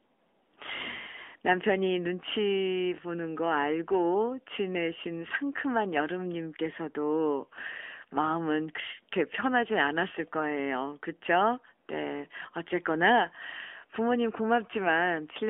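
Throughout, the speech carries AMR narrowband mobile codec damage: nothing passes outside roughly 250 Hz to 3.5 kHz, and the buzzy, synthetic texture fits a 10.2 kbps mode.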